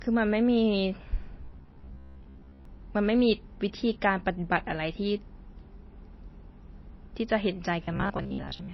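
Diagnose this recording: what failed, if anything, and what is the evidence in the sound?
Codec stage: the speech has plainly audible watery artefacts throughout, likely MP3 compression at a low bitrate around 24 kbps.

Driver or buffer stage: from 1.41 to 2.65 s and 7.84 to 8.73 s, a rigid 66.8 Hz robotic buzz likely comes from repeated short buffers of about 15 ms, replacing roughly half the audio.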